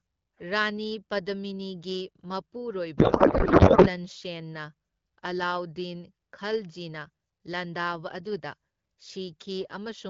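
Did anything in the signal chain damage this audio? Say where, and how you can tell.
Yes. From 2.97 to 3.88 s the speech turns into garbled noise and warble that barely follows it, then recovers cleanly into the light AMR-WB coding at around 12.65 kbit/s. This is a codec payload misread at the codec stage: the decoder keeps receiving valid-looking frames but reads their fields from the wrong bit positions. The pattern fits octet-aligned AMR being unpacked as bandwidth-efficient until both ends agree on the packing again.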